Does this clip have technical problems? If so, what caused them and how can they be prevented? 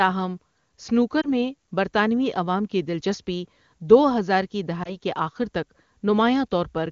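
Yes. Lost AMR speech frames cause brief dips at 1.21 to 1.28 s, just before "میں برطانوی", and at 4.83 to 4.96 s, between "دلچسپی دو ہزار کی" and "کے آخر تک". Each fits one corrupted 20 ms frame that the AMR-WB decoder concealed by reusing the previous pitch and vocal-tract settings at reduced gain. Better radio coverage and stronger channel error protection would prevent these frame losses.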